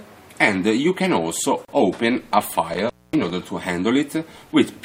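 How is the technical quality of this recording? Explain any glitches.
The recording has two technical faults, a short gap at a join and a stretch of intermittent contact.

At 1.65 s there is a gap at a join of encoded pieces, lasting about 34 ms. The sound was encoded in separate sections and joined without trimming, so the encoder's start-up delay and the padding of the last frame both remain. Continuous sound stops briefly, then resumes where it left off. On a waveform it shows as a narrow notch with softened edges. On a spectrogram it is a thin vertical band of missing energy.

From 2.73 to 3.30 s there is intermittent contact. A loose cable or plug opened the line, for about 238 ms in total across this stretch. The sound drops out or breaks up, with crackle where the contact opens and closes. While the line is open, faint hiss remains. On a waveform, signal collapses toward a low noise floor, with sharp spikes at the edges. 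A spectrogram shows broadband vertical streaks at those edges, with a low, even wash of hiss between them.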